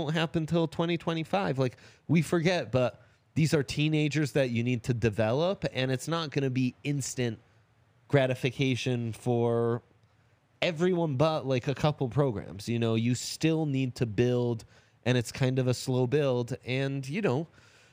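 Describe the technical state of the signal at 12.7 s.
At 12.7 s, as across the whole clip, imaging from linear upsampling is present: straight-line interpolation, fitting a doubling from 24 kHz, dulls the top of the band and leaves a mirrored copy from 12 to 24 kHz, about 35 dB down, heard as faint metallic shimmer on sibilants. Unlike aliasing, nothing folds downward.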